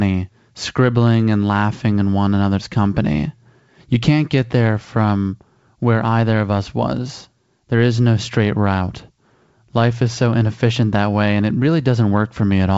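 Nothing here needs flagging: the speech comes over a G.722 wideband telephone link at 64 kbit/s, with the top end stopping around 7.7 kHz as that kind of line normally does.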